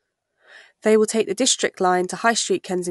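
Nothing faulty is audible anywhere in the speech recording.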